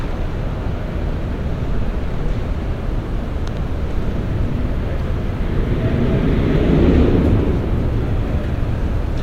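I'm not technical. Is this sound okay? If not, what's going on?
No, there's one problem. At about 3.48 to 3.59 seconds you'll hear a loud pop, actually two sharp pops in quick succession, much louder than the sound around them. The sound itself keeps going underneath. This is most likely an electrical jolt getting into the signal, from something like a cable being bumped, a switch flicking, or a bit of static, which the equipment turns into that sudden double thump.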